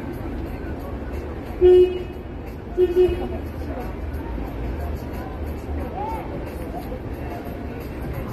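Across the whole clip, a recording of non-speech sound, the top end is missing: nothing is present above 13.1 kHz, leaving the audio dull, with a smeared, fizzy or warbling texture on sustained and noisy parts that is plainly audible throughout. This is most likely AAC compression, AAC-LC at a low bitrate that fits about 32 kbps. At that rate the encoder cuts the bandwidth and quantises coarsely, thinning or substituting detail in the upper bands.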